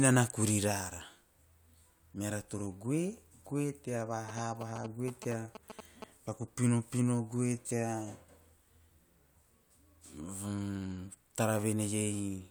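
From 4.29 to 6.04 s the speech is overlaid by GSM signalling bursts: a galloping dit-dit-dit of short buzzes at about 217 Hz, roughly 10 dB below the speech. A nearby 2G phone exchanging signalling bursts has its radio pulses rectified by the audio circuitry.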